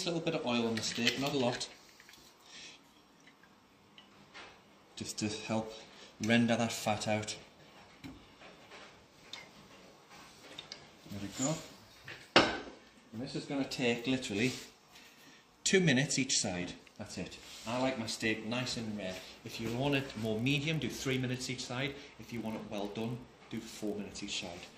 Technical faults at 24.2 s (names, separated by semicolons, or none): block size mismatch (padded)